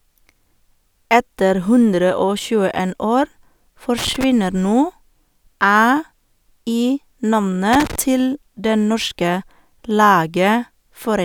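At 3.98 s the speech is broken by an irregular burst of crackle and scratching lasting about a quarter of a second, to 4.24 s, and a second burst of the same kind runs from 7.73 to 7.96 s. This is loose connector crackle: a worn or dirty contact in the signal path is making and breaking as it shifts, chopping the audio into fragments, with pops wherever the interrupted line carries DC.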